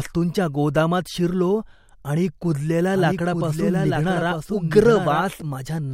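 After "गोदामात शिरलो आणि कुजलेल्या", from 2.94 to 5.42 s, a slower second capture path likely mixes in a doubled audio track: the speech repeats about a second later, somewhat quieter and dry, starting and stopping abruptly.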